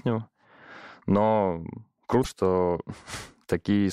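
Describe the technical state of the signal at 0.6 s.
At 0.6 s the speech signal is intact, with no audible dropout, distortion, clipping or other technical fault at that point.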